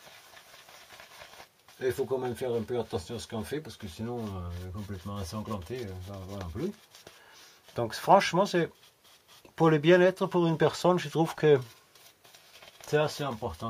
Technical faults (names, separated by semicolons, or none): none